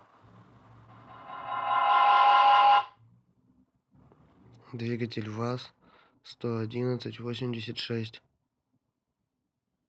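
A feedback loop formed between a microphone and a loudspeaker on the same call, each pass around it adding level, producing a feedback howl from 0.88 to 3.08 s. Instead of dying away, the repeats reinforce and narrow onto a tone of roughly 700 Hz, pulsing at about 200 ms intervals, the loop's round-trip delay. At its peak the howl sits about 11 dB above the speech, over a signal band-limited to 8 kHz by the call path.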